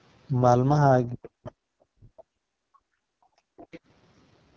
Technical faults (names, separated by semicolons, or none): AMR wideband (HD Voice) codec; speech suppressed in double talk; other side's voice leaking through